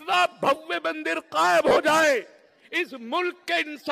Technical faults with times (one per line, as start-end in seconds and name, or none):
1.68-1.76 lost LE Audio frames
3.42 lost LE Audio frames